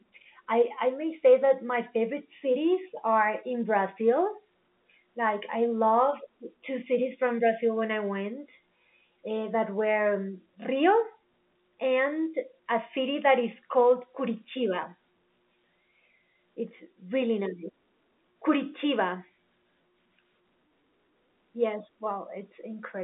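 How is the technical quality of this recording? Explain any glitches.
No glitches to explain.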